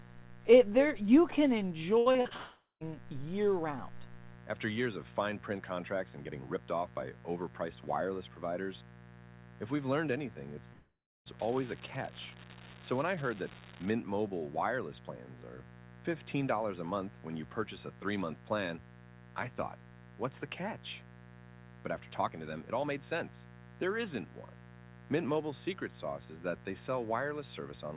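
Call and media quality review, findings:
Call and media quality review, findings:

Mains buzz, whole clip: steady raspy 60 Hz buzz about 20 dB under the speech, harmonics running up to the 4 kHz band edge of the G.711 mu-law path. Probably a dimmer, rectifier or poor shielding injecting switching spikes twice per mains cycle.

Repeated packet loss (robotic sound), 1.98–2.33 s: choppy speech with four short holes, longest 76 ms, and about half the stretch patched over. Jitter buffer concealment keeps re-stretching the last sound, then the next loss hits.

Long network dropout, 2.37–2.83 s: last sound smeared into a fading buzz or hiss, then about 0.17 s of near-silence before speech resumes with a chunk missing. Likely a network dropout, with concealment running out of material to extend.

Long network dropout, 10.73–11.28 s: same pattern, longer. Brief concealment tail, then about 0.35 s silent, and audio picks up with that piece gone. 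Likely a network outage rather than anything at the source.

Unreliable data bit, 11.39–13.92 s: constant fizzy crackle that carries on through the pauses too. Uniform-size spikes, so probably a marginal data line flipping one bit in random samples somewhere in the capture or transport hardware.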